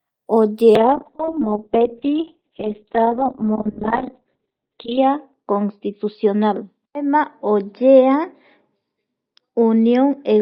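A speech clip with a call bitrate drop starting at 0.76 s and lasting to the end. The encoder is starved of bits and codes the sound far more coarsely. The top end is cut from about 20 kHz to 4 kHz, so the speech turns muffled and rough. The worst stretch lasts about 4.2 s. The change points to a fall from roughly 40 kbps to 6 kbps, and it never recovers.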